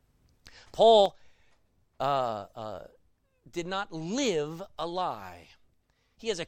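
A speech recording in which one channel drops out at 1.06 s and stays gone to the end. From that point the level falls abruptly by about 6 dB, as the mono sum loses half of the shared signal, likely from a stereo channel cutting out upstream.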